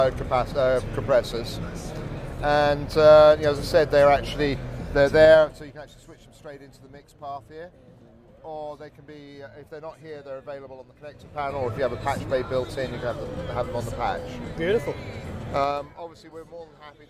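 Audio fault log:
5.21–5.80 s, 10.97–11.73 s, 15.53–16.0 s, zipper noise: the level drops, rises, then drops again by about 20 dB in 3 dB jumps, each unsmoothed step ticking audibly.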